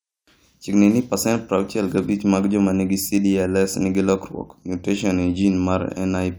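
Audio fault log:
No faults turn up anywhere in the speech recording. There is nothing to log.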